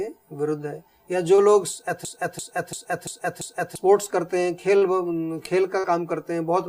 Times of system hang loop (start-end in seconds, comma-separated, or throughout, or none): 2.05-3.75